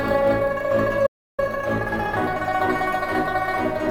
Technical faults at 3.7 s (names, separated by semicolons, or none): none